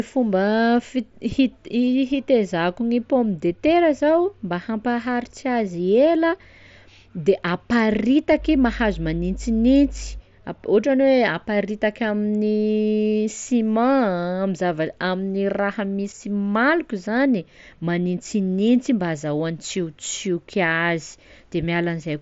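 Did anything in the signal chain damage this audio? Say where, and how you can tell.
Yes. Mains hum enters at the analogue wiring stage, from 8.36 s to 10.22 s: a steady 50 Hz tone with low harmonics rises to a strong level, not far below the speech, then stops. Its short span points to a ground loop or a transformer briefly coupling into the line, with power-line current leaking into the signal path. It sits under the speech and passes through the mSBC headset codec, whose band stops near 7.7 kHz.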